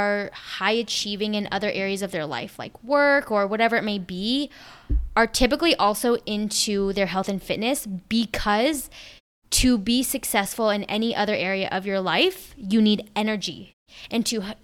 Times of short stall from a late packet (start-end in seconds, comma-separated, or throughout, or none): none